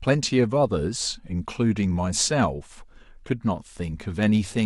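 From 0.24 s to 4.56 s, clock slip clicks recur roughly every 0.15 s, around thirty faint ticks over the speech. Two unsynchronised clocks drifting apart, likely by around 150 ppm, make a single sample drop or repeat each time. The spectrogram shows evenly spaced thin vertical lines.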